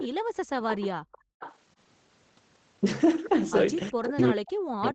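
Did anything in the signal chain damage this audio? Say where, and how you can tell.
Yes. The far end's call processing, likely an echo canceller not fully cancelling its loudspeaker, sent an echo leak back. A delayed copy of the speech, about 0.38 to 0.40 s late and roughly 15 to 20 dB down, trails the speech at 0.00–0.08, 0.69–1.56, 4.03–4.21 and 4.83–4.91 s.

The same echo canceller also gated the background hard while its loudspeaker played. At 0.16–0.36 s and 1.01–1.40 s the room tone drops by up to about 40 dB and then snaps back when the canceller releases.

Speech was suppressed in double talk from 3.91 s to the end. The likely cause is the canceller confusing the local talker with loudspeaker echo while both sides spoke and turning everything down. The speech dips by around 40 dB.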